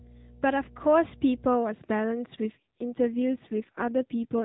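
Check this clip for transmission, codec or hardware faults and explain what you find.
Two faults are present in the speech, carried over an AMR narrowband mobile link whose 4 kHz ceiling and light coding texture can be heard throughout.

Mains hum, from 0.0 to 1.54 s: power-line current leaks into the signal path, most plausibly through a ground loop or nearby transformer. It sounds like a steady low 60 Hz drone sitting roughly 15 dB below the speech.

AMR rate drop, from 2.44 to 4.44 s: the network pushes the codec to a lower mode so more bits go to error protection, which fits a step from 12.2 to 5.9 kbps. The bandwidth and continuity hold, but the voice turns buzzier and more synthetic until the end.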